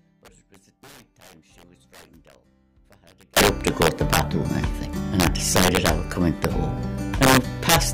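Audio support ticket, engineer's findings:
Integer overflow, throughout. Violent cracks on loud peaks, far sharper than clipping. Gain stage or mixer sum driven about 11 dB past full scale, wrapping instead of saturating. Peaks flip to the opposite rail. Hits a small share of samples, roughly one in seventy.

Audio dropout to a faint residue, 0.00 to 3.37 s. Already under way when the audio begins. Gap holds only a faint leak of the sound, about 30 dB below normal. Signal returns abruptly at 3.37 s. Likely an upstream source or routing loss, with the downstream path still live.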